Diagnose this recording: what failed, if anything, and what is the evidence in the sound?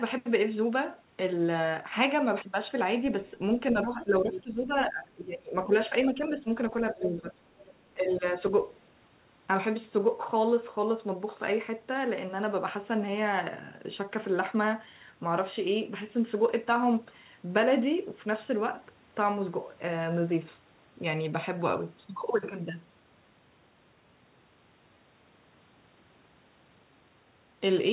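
Speech suppressed in double talk, in call processing: the talker ducks by up to roughly 15 dB at 3.72–5.70, 5.90–6.48, 6.81–7.34 and 7.94–8.52 s, likely the echo canceller turning down both sides.

Other side's voice leaking through, also in call processing: second-voice scraps at 3.82–4.03, 4.32–4.43, 4.82–4.88 and 7.59–7.74 s, about 10–30 dB down. This is likely residual loudspeaker echo the canceller did not fully remove.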